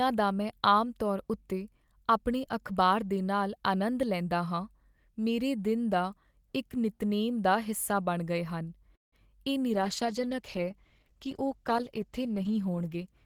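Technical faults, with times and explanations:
8.95–9.15 s, call audio freeze. The speech halts and a brief fill decays into about 160 ms of silence. It then resumes exactly where it stopped, so nothing is lost, but everything after runs 170 ms later. Packets were likely held up, emptying the jitter buffer.
9.69 s to the end, call bitrate drop. Right after "ਹਨ ਇਹ" the speech turns rougher and duller. The encoder fell from 40 to 13 kbps, holding the lowest rate for about 3.2 s. Coarser coding and a narrower band strip detail and high frequencies.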